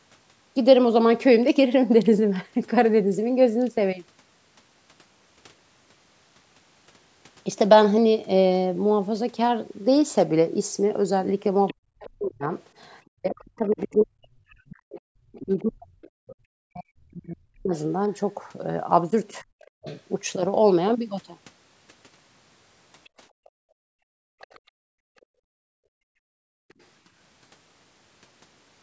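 Other side's voice leaking through appears faintly at 11.67–11.74, 13.72–14.04, 16.27–16.35, 19.33–19.97, 23.04–24.6 and 26.69–26.74 s. These are a second voice, roughly 20 to 40 dB below the talker, likely loudspeaker echo the canceller left in the microphone. From 11.73 to 19.86 s there is speech suppressed in double talk. For about five seconds in total, the talker's voice dips and breaks up, up to roughly 40 dB down, likely because the canceller turned everything down while both sides spoke. Between 23.3 and 26.69 s, the background is gated by the echo canceller. The room sound drops out for about three seconds, at most about 37 dB down, while the loudspeaker plays, and returns as the canceller releases.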